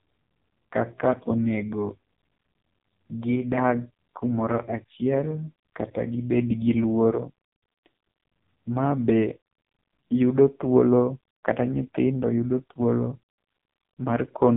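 Throughout, AMR narrowband mobile codec damage is heavy: nothing passes above 3.8 kHz, a flat ceiling on the spectrogram, and the buzzy, synthetic speech suggests a mode near 5 kbps.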